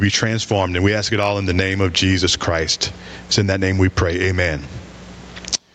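Throughout the speech, the gain pumps up and down, a swing of around 15 dB. Loud and quiet passages sit unnaturally close in level, so the sound feels squashed. This is gain pumping, likely caused by microphone gain set far too high, with a fast limiter or compressor clamping it down on each loud sound; the room noise sits about 39 dB below the speech.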